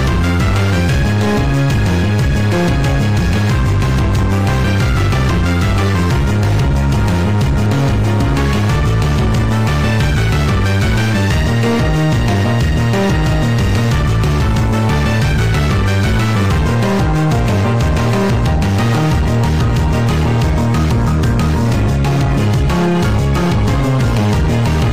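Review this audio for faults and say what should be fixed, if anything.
At 7.66 s and again at 16.46 s the audio jumps forward, losing roughly 20 ms each time with no gap of silence. This is likely a dropped buffer (overrun), where samples were overwritten before the program collected them and the two sides joined directly. The missing stretch and lack of any hush set it apart from a dropout, which leaves silence. Prevent it with larger capture buffers or higher priority for the recording thread.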